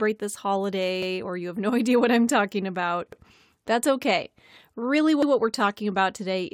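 Right after "what I'm talking about", at 3.13 to 3.23 s, you get a little stutter where about 100 ms of speech plays twice, and the same thing happens again at 5.23 to 5.33 s. That's overlapping chunks: the audio was handled in 2.0 s blocks, and each new block starts 100 ms before the previous one finished, so the boundary material gets repeated. You hear it as a brief doubled fragment at each join, spaced 2.1 seconds apart.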